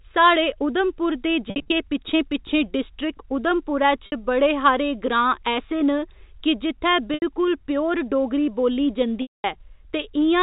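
Packet loss with pitch repetition hits the speech four times. At 1.5 to 1.69 s, after "उधमपुर दे", brief gaps leave a buzzy held tone. At 4.06 to 4.12 s, before "बड़े हारे", and at 7.14 to 7.22 s, repeated pitch periods bridge 60 ms and 80 ms gaps. At 9.22 to 9.44 s, after "प्योर डोगरी बोल्ली", 220 ms is lost, and the held tone fades toward silence before speech returns.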